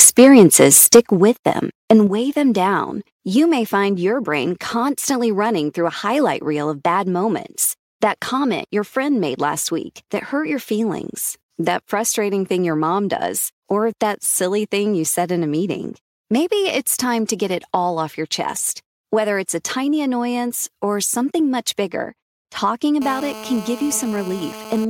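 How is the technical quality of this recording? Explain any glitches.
The recording has three kinds of fault, all near the start or the end.

Microphone overload runs from 0.0 to 1.0 s, just before "with them and weigh". The input was likely set too high, by about 7 dB. Peaks hit the converter's limit and their tops are flattened, roughly one sample in twenty. The loudest syllables get a harsh, crackly edge.

Microphone volume stepped down happens at 0.05, 1.05, 2.07 and 23.13 s. The drops are about 2, 6, 5 and 2 dB. The one at 2.07 s falls between "with them and" and "weigh them down". The one at 23.13 s comes after "something much bigger talking". Each is likely the call software cutting the device's input gain after it found the microphone too loud or clipping. Speech and background fall in level together, suddenly.

GSM phone buzz runs from 23.02 to 24.85 s. A nearby 2G phone in a call is transmitting in bursts at about 217 Hz. 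The audio circuit rectifies those radio pulses. The result is a steady, raspy buzz rich in harmonics, about 12 dB below the speech.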